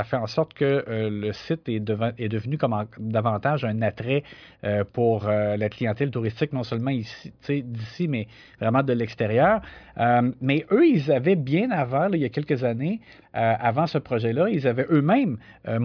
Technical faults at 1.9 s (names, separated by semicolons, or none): none